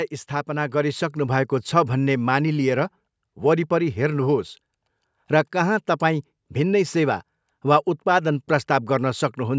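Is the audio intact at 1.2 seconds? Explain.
No. At 1.2 seconds the clip is inside an automatic gain rising event that runs from 0.45 to 1.59 s. The automatic gain control judged the incoming level too low and stepped its gain up gradually, by about 6 dB over that stretch. Because the gain applies to everything the microphone picks up, the speech and the background noise swell together, growing steadily louder across roughly a second rather than jumping.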